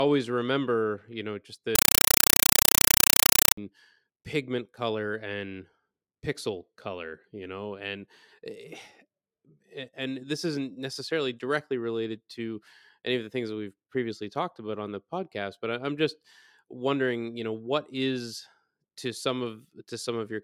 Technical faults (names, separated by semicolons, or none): compressed stream played as audio